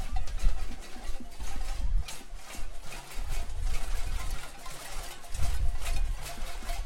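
Nothing technically wrong turns up anywhere in these sounds, so there's no fault to describe here.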